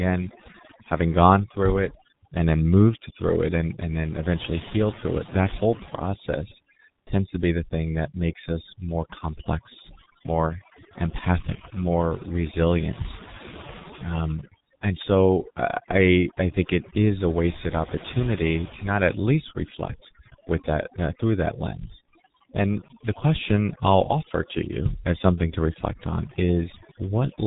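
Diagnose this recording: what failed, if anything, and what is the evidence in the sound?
Overdone noise removal runs throughout, a call-processing fault. The background falls to near silence dotted with twinkling specks. A suppressor set far too hard is cutting each frequency band near its noise estimate, and quieter speech components vanish with them.

The G.723.1 codec, heavily damaged and also present throughout, is a codec-stage fault. At 6.3 kbit/s nothing above 4 kHz survives, so the speech is muffled and hoarse with smeared consonants. Its 30 ms frames and slowly updated voice model cannot track rapid articulation.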